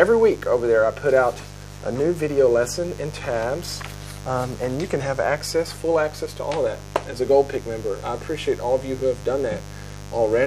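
A steady mains buzz runs under the audio from start to finish, a raspy hum fairly loud against the wanted sound rather than buried beneath it. It points to a 50 Hz supply, with a dimmer, rectifier or unshielded lead injecting sharp switching spikes twice per cycle. On a spectrogram it shows as evenly spaced horizontal lines at multiples of 50 Hz climbing into the kHz range, and the waveform carries a repeating spiky ripple every 10 ms.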